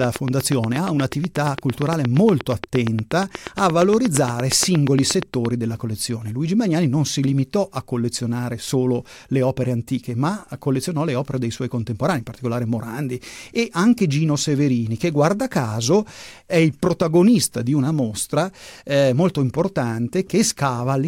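From 0.04 s to 5.46 s, a train of clicks runs over the speech, ending just before "della collezione". The clicks come at a steady pace, about 8.5 per second, around fifty in all. Each one has much the same sharp shape. They stand well above the speech, peaking around 15 dB higher, and they tick on through the pauses too. The cause is likely interference from nearby equipment or a faulty connection or power supply, injecting a pulse at a regular interval.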